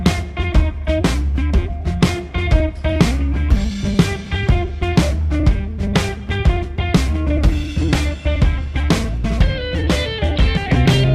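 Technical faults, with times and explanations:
No technical faults can be heard anywhere in this clip. There is nothing to report with a time or range.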